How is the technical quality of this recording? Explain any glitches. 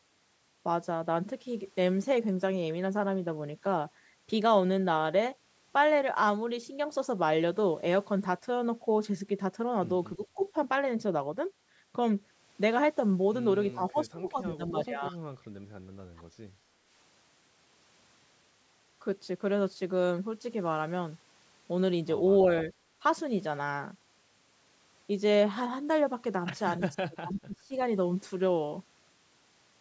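The recording has clear call-path faults: the speech is repeatedly pulled down in level when both ends talk at once, and one faint echo slips through. The audio is band-limited, with nothing above 8 kHz, as expected from call microphone processing.

Speech suppressed in double talk occurs four times: 10.16–10.55 s, 13.73–15.3 s, 16.15–16.22 s and 26.79–27.74 s. The level sinks by about 15, 25, 15 and 30 dB respectively, in patches totalling roughly a sixth of a second, about a second, under a tenth of a second, and well over half a second. The likely cause is an echo canceller that cannot separate the near talker from loudspeaker echo during overlap, so it attenuates everything and leaves the voice dipping or breaking up.

An echo leak appears at 10.4–10.45 s, inside the first suppression event. It is a brief, faint delayed copy of the voice, trailing by 314 ms and sitting around 30 dB below the direct speech. 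It is likely residual loudspeaker sound that one end's microphone picked up and its echo canceller failed to remove fully. The leaked audio was sent back as a short scrap.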